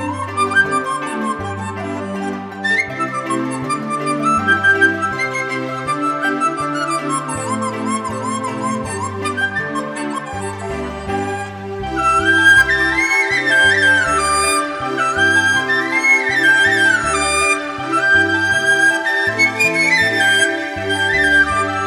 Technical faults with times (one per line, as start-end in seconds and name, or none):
none